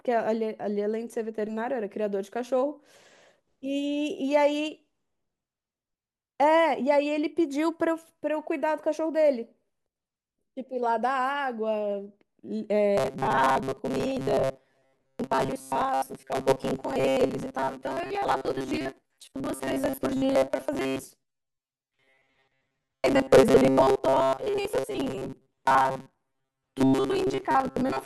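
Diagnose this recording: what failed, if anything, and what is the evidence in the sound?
From 12.98 s to the end, the speech turns into robotic sound from repeated short buffers: a rigid, metallic buzz near 133 Hz that still roughly tracks the syllables. That pitch fits a fragment of about 7.5 ms being replayed back to back, with most of the real audio skipped. This is likely a driver or buffer underrun in which audio arrives too seldom. Unlike a codec artefact or a pitch shift, the buzz stays fixed no matter how the talker's own pitch moves.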